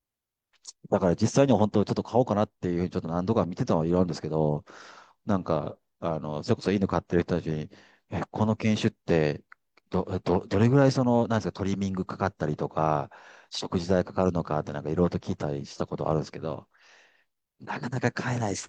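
No technical faults can be heard in this recording.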